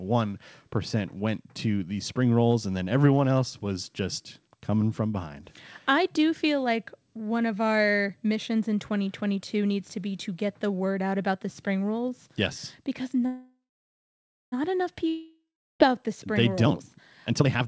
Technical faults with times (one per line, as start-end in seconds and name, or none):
13.26-14.54 call audio freeze
15.09-15.90 long network dropout
16.63-17.67 jitter buffer speed-up